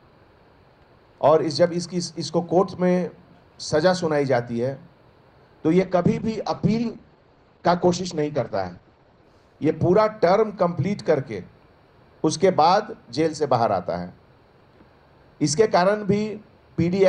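From 5.82 s to 11.55 s the sound turns rough, watery and muffled, its top end falling from 20 kHz to 8 kHz, worst for about 3.2 s. This is a call bitrate drop: the encoder was starved of bits, consistent with 96 kbps falling to about 11 kbps.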